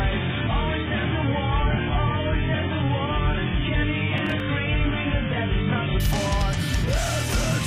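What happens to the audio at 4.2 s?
At 4.18 to 4.4 s there is processor overload crackle: the processor misses several deadlines in a row on tiny buffers of a few milliseconds each. Each miss replays stale audio with hard edges, heard as gritty tearing. On a waveform this appears as small abrupt discontinuities; on a spectrogram, as thin vertical broadband streaks. Underneath, the adaptive stream starting at a low bitrate is still active until 6.0 s. The spectrogram is empty above 3.7 kHz, consistent with a very low-bitrate AAC version of about 8 kbit/s, so the sound is dull and smeared until the sudden step up.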